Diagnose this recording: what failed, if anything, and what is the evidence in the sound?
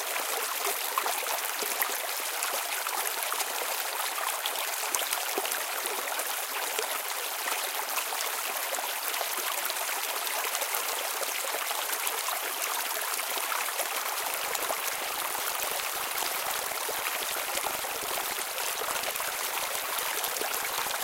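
Buffer tearing at the driver or buffer stage, from 14.04 s to the end: a 25 Hz rattle suggests a 40 ms period, with roughly a third of each period replaying older audio.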